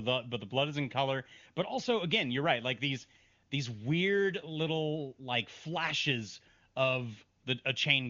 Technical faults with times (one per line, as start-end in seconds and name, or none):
none